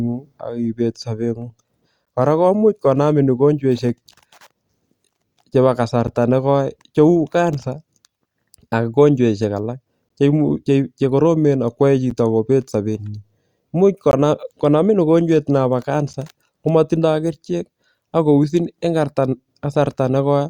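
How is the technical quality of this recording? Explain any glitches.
The speech is broken by brief dropouts from a gap between stream segments at 2.05, 4.07, 6.07, 8.08, 10.09, 12.10, 14.11 and 16.13 s. Misaligned timestamps on 2-second segments leave 5 to 18 ms holes filled with silence, heard as clicks and shown as flat, hard-edged vertical stripes.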